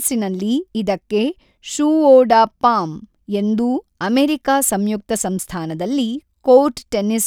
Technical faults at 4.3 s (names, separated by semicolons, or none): none